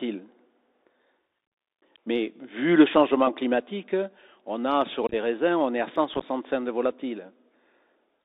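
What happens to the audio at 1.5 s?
At 1.47 s the speech drops out for about 49 ms, to 1.52 s, from unconcealed Bluetooth headset packet loss. A burst of short voice packets between headset and phone failed to arrive, and nothing was synthesized to cover them, so silence or an idle pattern fills the gap. The result is a brief hole with hard edges that can click. Because the link is CVSD, the adaptive step size has to rebuild, so the speech resumes quieter for a moment.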